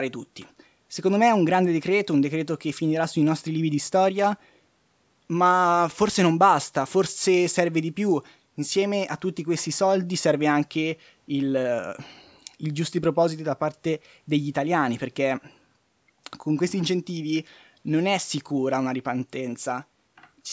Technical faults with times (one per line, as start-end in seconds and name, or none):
none